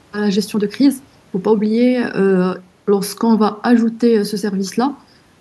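No technical faults can be heard anywhere in this speech recording. Nothing interrupts, distorts or alters the sound at any point.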